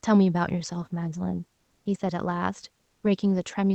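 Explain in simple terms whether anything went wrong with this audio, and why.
Twice in this speech clip the real background drops out during a pause and is replaced by comfort noise: from 1.57 to 1.85 s (about 280 ms) and from 2.87 to 3.03 s (about 160 ms). In those gaps the room's natural detail gives way to a flat, smooth hiss, slightly louder the first time and a bit quieter the second. The likely cause is the call codec's silence-saving mode, which stops sending sound in pauses and lets the receiver fill the gap with generated noise.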